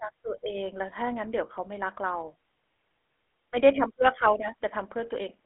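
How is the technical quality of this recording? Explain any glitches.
The recording is degraded throughout by plainly audible telephone coding. The GSM full-rate codec is audible from start to finish. It models the vocal tract and drives it with a coarse, regularly spaced pulse excitation. That gives the voice a buzzy, gravelly roughness, consistent with a 13 kbps stream. The band sits roughly between 250 Hz and 3.4 kHz, with nothing above 3.8 kHz.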